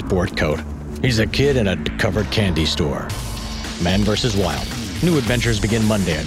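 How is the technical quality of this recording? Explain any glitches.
One glitch stands out, at 1.87 s. The sound lurches forward and roughly 150 ms of audio never plays. This is compressed frames being skipped: whole blocks of the encoded stream were missing or rejected as damaged by the decoder, so playback jumped ahead by a few frames, consistent with frames of about 32 ms.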